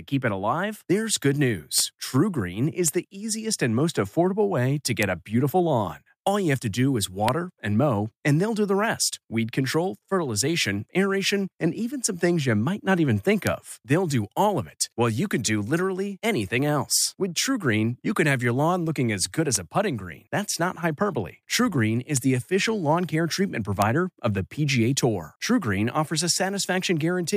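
Speech with integer overflow. Loud peaks wrap to the opposite sign, giving sharp cracks at 1.78, 2.88, 5.03, 7.29, 13.47, 19.56, 22.17 and 23.82 s. Overdrive is at most about 1 dB.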